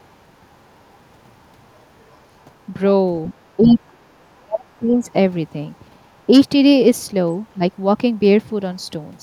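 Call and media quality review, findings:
Other side's voice leaking through, 3.26–3.34 s, 3.69–3.73 s, 4.39–4.43 s: short scraps of a second voice under the talker, about 20 dB down, then about 15 dB, then a faint trace near 40 dB down. Likely residual echo: the far end's loudspeaker playback is reaching the microphone and the echo canceller is not fully removing it.

Speech suppressed in double talk, 3.57–5.06 s and 7.54–7.62 s: talker level pumps down in pieces while the far end is also active. First stretch dips as deep as about 30 dB, roughly a second of speech affected in total. Second is a brief dip of about 10 dB. Likely echo canceller treating near and far speech as one and attenuating both.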